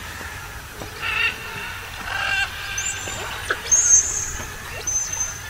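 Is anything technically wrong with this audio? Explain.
No, nothing technically wrong can be heard in this audio. There are no faults to point to anywhere in it.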